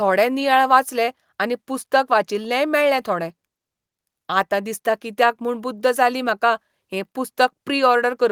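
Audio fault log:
No technical faults are audible anywhere in the speech recording.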